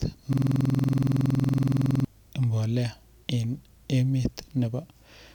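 A system hang loop from 0.33 to 2.05 s: the driver froze, replaying one 46 ms buffer, which fits 2048 samples, 37 times, giving a rasping 21.5 Hz buzz.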